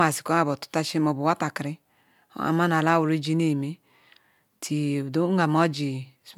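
Speech recording, with nothing technically wrong to report anywhere in it.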